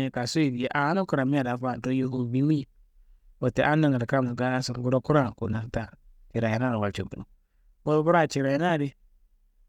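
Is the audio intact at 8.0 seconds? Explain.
Yes, the speech at 8.0 seconds is intact, with no dropout, click, distortion or other fault at that moment.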